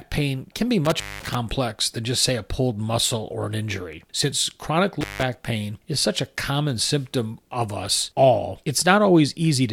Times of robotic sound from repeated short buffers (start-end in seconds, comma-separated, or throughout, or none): none